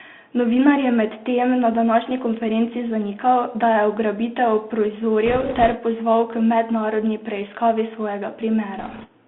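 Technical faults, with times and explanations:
Throughout, Bluetooth CVSD headset codec. Sound is confined to about 150 Hz to 3.5 kHz. Its one-bit adaptive steps, fitting a 64 kbps link, leave scratchy s sounds and granular hiss.
5.25–5.76 s and 8.79–9.07 s, bit errors on a Bluetooth voice link. A rushing crackle appears, without loud clicks. A few percent of bits flipped, each causing only a small, fading error.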